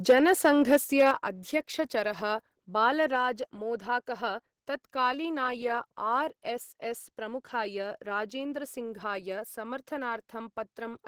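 The likely cause is microphone overload: input volume set about 8 dB too high for the converter, so from 0.09 to 1.11 s about 3 percent of samples are flattened, giving loud syllables a harsh crackle. Microphone volume stepped down twice, likely the call software reacting to that clipping and cutting input gain in single steps, so speech and background drop abruptly by about 4 dB at 0.11 s and about 7 dB at 1.11 s.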